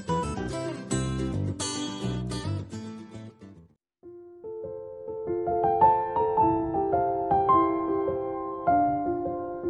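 No technical faults can be heard anywhere in the recording.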